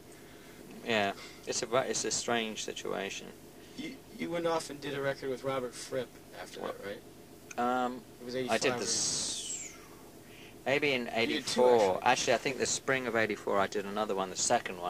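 No technical faults can be heard anywhere here.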